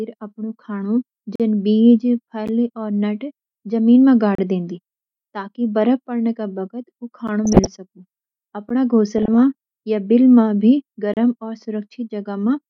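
Blocks of digital silence open in this speech, each cutting in and out with no fade. The first, at 1.36 to 1.40 s, is a 43 ms hole that fits a missed 2048-sample buffer. A brief tick follows at 2.48 s, about 11 ms long and consistent with a 512-sample block. A 32 ms dropout at 4.35 to 4.38 s falls just before "देंनदीं ताकि बर्फ पड़ण", and another 11 ms tick comes at 7.28 s.

DAB burbling starts at 7.45 s and runs to 7.67 s. Weak reception let bit errors slip past the error correction into the MP2 data, at roughly half a percent. Corrupted samples put short blips of noise in single sub-bands across about a dozen damaged frames. The speech takes on blips of sub-band noise.

A third 11 ms silence ticks at 8.69 s. The burbling returns from 9.18 to 9.35 s, ending right before "या बिल भी", with the same sub-band disturbance. The last fault is a 32 ms block of digital silence at 11.14 to 11.17 s, just after "या बिल भी", heard as a short gap.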